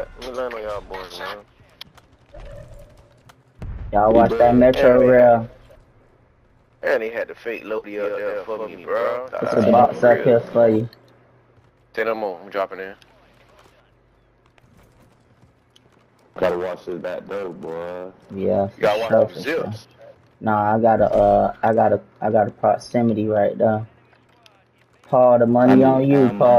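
From 7.99 to 9.85 s the clip carries a doubled audio track: a second, full-band copy of the sound trails the original by around 100 ms at roughly equal level, with no decay or room colour, cutting in and out abruptly. Likely a slower capture path mixing in again.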